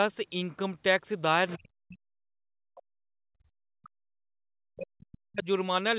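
A brief second voice surfaces in this speech clip from 1.48 to 1.57 s, faint at roughly 20 dB below the talker and sitting behind the main voice. This is the other side's voice leaking through: the far end was most likely playing on the talker's loudspeaker, and the echo canceller left a scrap of it in the microphone signal. Right after, the talker's own voice repeatedly sinks and breaks up, from 1.56 to 2.32 s, from 2.67 to 4.39 s and from 4.62 to 5.47 s. It falls by as much as about 40 dB and drops out in pieces across several seconds in total. This is speech suppressed in double talk. With both sides talking at once, the canceller likely could not tell the near voice from the loudspeaker echo, so it turned everything down. Under all of this, the audio has nothing above 4 kHz, which fits a G.711 A-law call path at 64 kbps.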